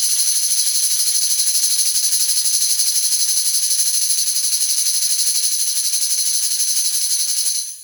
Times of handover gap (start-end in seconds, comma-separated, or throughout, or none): none